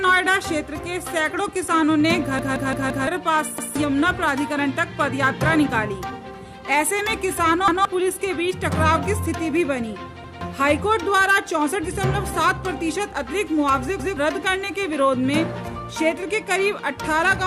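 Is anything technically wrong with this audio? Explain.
Yes. A repeated buffer occurs at 2.39 s (four extra plays, losing roughly 0.7 s) and once each at 3.58, 7.68, 10.24 and 13.99 s. Late-arriving audio makes the device replay its last 171 ms block, which fits an 8192-sample buffer, producing hard-joined stutters.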